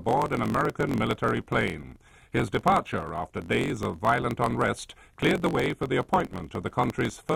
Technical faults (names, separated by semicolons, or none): block size mismatch (truncated)